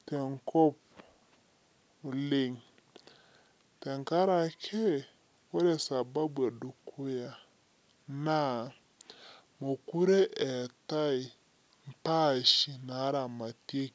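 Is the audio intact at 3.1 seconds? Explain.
No, a wrong sample rate affects the whole clip: playback runs slower than recording, which fits 22 kHz audio played at 16 kHz, so the speech is 0.73 times as fast and about 5.5 semitones lower.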